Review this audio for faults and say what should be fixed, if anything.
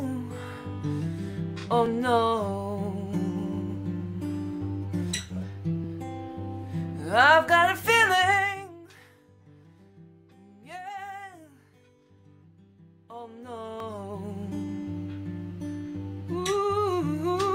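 At 1.86 s and again at 13.80 s the sound skips forward, losing roughly 20 ms each time. The two sides are butted together with no gap. This is likely audio missing between chunks: a recorder or processor working in 4-second blocks drops a sliver at the handover, and the two events sit three blocks apart. On a waveform each shows as an abrupt discontinuity. On a spectrogram it is a thin vertical seam where harmonics jump. Prevent it by double-buffering so the next chunk opens before the current one closes.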